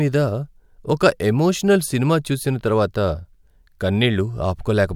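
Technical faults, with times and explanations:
No technical faults detected in this speech recording.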